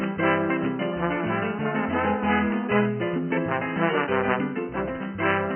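No technical faults are audible.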